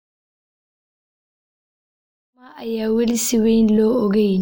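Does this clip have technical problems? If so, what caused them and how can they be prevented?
No, there are no technical problems in this speech clip. The level rises in a smooth, deliberate fade-in from around 2.5 s to 3.27 s, with no click or hard edge.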